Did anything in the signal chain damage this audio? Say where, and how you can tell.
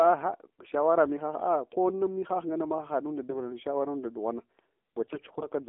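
Yes. Throughout, the speech is thin, buzzy and synthetic, confined to about 250 Hz to 3.4 kHz. That is the codec stage: an AMR narrowband mobile codec at a low rate, which fits the 7.4 kbps mode.

Brief hoarse, gargly bursts appear at 0.62–0.71 s and 3.30–3.40 s, with a longer one at 5.04–5.49 s. These are AMR bit errors on the network link: flipped, weakly protected bits misplace pulses across several frames.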